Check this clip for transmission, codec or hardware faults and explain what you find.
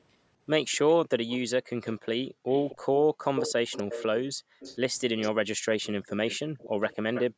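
Two faults stand out in the speech: a delayed echo returning from the far end, and brief dropouts of the room sound.

Echo leak runs from 0.72 to 2.77 s, 3.36 to 4.06 s, 4.6 to 5.3 s and 5.83 to 7.23 s. A copy of the speech trails it by 250 ms, most likely because a loudspeaker's pickup escaped echo cancellation. It is faint early, about 20 dB down, but strong at 3.36 s, only about 5 dB down, and about 15 dB down later. A spectrogram shows ghost harmonic traces shifted a quarter-second right.

Background gated by the echo canceller appears at 2.3 to 2.46 s, 3.11 to 3.24 s, 4.33 to 4.6 s, and from 7.3 s to the end. The canceller clamped the microphone while the loudspeaker played, pulling the room noise down by about 40 dB. It sounds like sudden silent holes. The waveform shows the noise floor collapsing to near-flat, and the spectrogram shows blank vertical slots. Above them, the call's band limit leaves nothing over 8 kHz.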